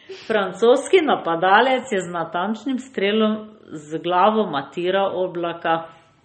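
From start to finish the speech sounds watery and swirly, with nothing above about 8.4 kHz. That's likely MP3 compression at a starved bitrate, which fits roughly 32 kbps. The encoder chops the treble and lets weak frequency lines flicker between frames.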